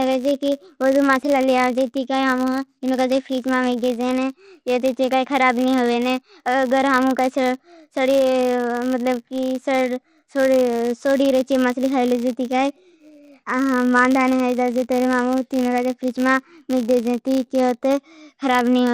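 A steady buzz at 100 Hz runs under the speech from start to finish, rising and falling with the level of the talker and thinning out in the pauses. It is the sound of a filter restarted on every block: the filter discards its internal state at each block boundary and starts again from silence, so every block opens with a small transient. Those transients repeat a hundred times a second, which points to 10 ms processing blocks.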